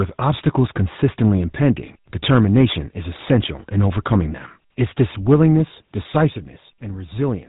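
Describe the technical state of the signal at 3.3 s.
At 3.3 s the signal sits inside a short burst of microphone overload running from 3.21 to 3.35 s. The waveform peaks are squared off, most likely because the input gain drove the converter about 4 dB past its ceiling, so a small fraction of samples are flattened at the converter's limit. The cut-off tops add a harsh, crackling edge to the loudest part of the speech in that span.

Underneath this, the whole clip carries the GSM full-rate codec. The vocal tract is modelled and driven by a regularly spaced pulse excitation that keeps only every third sample, and the damage is plainly audible as a buzzy, gravelly roughness. Nothing passes above 3.8 kHz, so the top of the speech band is missing. The character fits a bitrate of around 13 kbps.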